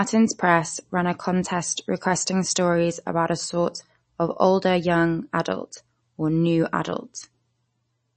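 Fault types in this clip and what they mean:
MP3 compression: the speech is likely MP3-coded at a low rate, fitting 32 kbps, with nothing above 8.3 kHz and a watery, swirly texture that a simple low-pass filter wouldn't add.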